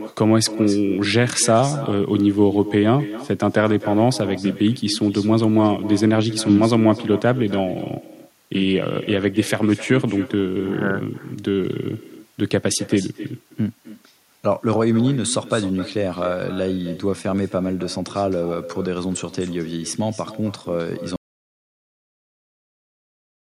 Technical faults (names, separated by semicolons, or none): echo with no canceller; audio dropout to silence